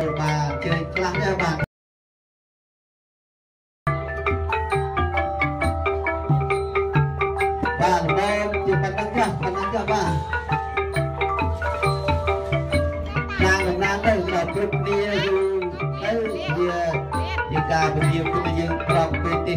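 The audio has an audio dropout to silence from 1.64 s to 3.87 s: the signal cuts off abruptly, leaving about 2.2 s of silence with no room tone, then resumes mid-flow. This likely reflects a momentary loss of the input, such as a disconnected device or stray mute.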